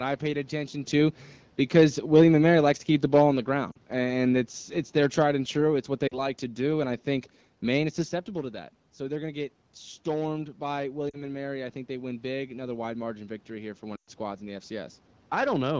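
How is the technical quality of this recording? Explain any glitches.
The recording has three kinds of fault: a slow gain drop, four short dropouts from lost speech frames, and a gradual gain rise near the end. The call runs over a wideband AMR link that sounds consistent with HD Voice at around 12.65 kbit/s.

Automatic gain falling, 1.63 to 6.88 s, from just after "I paid attention to" until "I think": the gain control judged the input too loud or its background too strong, and lowered its gain by about 6 dB. Voice and room background sink together across those five seconds.

Lost AMR speech frames, at 3.71 to 3.76 s, 6.08 to 6.23 s, 11.09 to 11.24 s (right after "to get stormed by") and 13.95 to 14.10 s: corrupted frames were replaced by the decoder repeating its last good pitch and vocal-tract settings at falling gain. The first three each lose about 40 ms, heard as brief drops toward near silence, consistent with two frames each. 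The last loses about 120 ms, long enough for the sound to drop to near silence before recovering roughly, consistent with six frames.

Automatic gain rising, 11.55 to 15.05 s: the input level fell by about 9 dB, and the gain control responded by slowly raising its gain by about 4 dB. Voice and background swell gradually over three and a half seconds, partly restoring the level.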